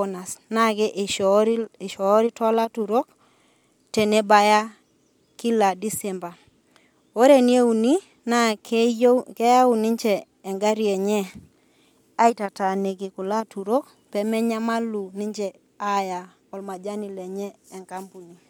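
No technical faults can be heard anywhere in this speech recording. Nothing interrupts or distorts the sound at any point in the clip.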